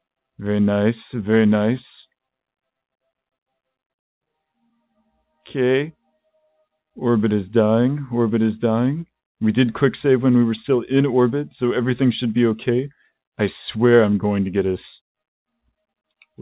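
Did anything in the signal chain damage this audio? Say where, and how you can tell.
No, nothing in the signal chain damaged this audio.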